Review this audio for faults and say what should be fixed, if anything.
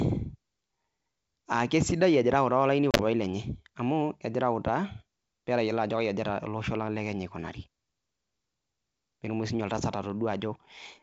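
Between 2.91 and 3.01 s the speech breaks into hard-edged gaps, about 50 ms of sound lost across an 80 ms stretch, the longest single hole 30 ms. Each time the speech resumes it comes back slightly distorted before settling. This is packet loss on an ADPCM call. A handful of packets went missing, and the G.722 decoder's adaptive predictor and step size drifted out of step with the sender's, so it needed tens of milliseconds to resynchronise. Elsewhere the wideband G.722 coding at 64 kbit/s leaves only faint traces. To prevent this, carry the call over a more reliable network path with a jitter buffer and apply packet loss concealment that also resets the ADPCM decoder state after a gap.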